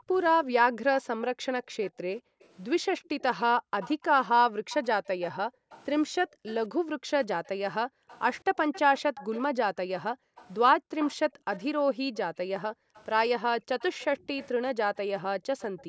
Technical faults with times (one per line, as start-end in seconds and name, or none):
0.00-9.12 background gated by the echo canceller
1.83-9.42 echo leak
10.07-15.88 background gated by the echo canceller
10.36-15.84 echo leak